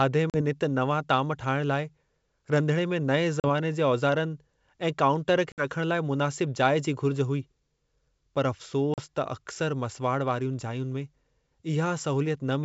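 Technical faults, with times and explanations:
0.30–0.37, 3.40–3.45 (right after "रंधिणे में नएं"), 5.52–5.64 and 8.94–9.00 s: packet loss on an ADPCM call. Roughly 40 to 60 ms, two or three packets' worth, drops out as hard-edged silence. Speech returns slightly distorted until the decoder's predictor and step size catch up with the sender's.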